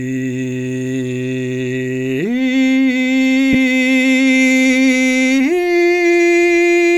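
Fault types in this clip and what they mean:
Lost LE Audio frames: The Bluetooth LE Audio link dropped about 15 ms of music between 3.53 and 3.55 s, which fits two consecutive frames. The LC3 decoder filled the gap by repeating the last good spectrum with its phases scrambled. Because the gap is short, the fade-out never takes hold. What you hear is a brief grainy smear, where tonal content turns momentarily noisy before the music resumes.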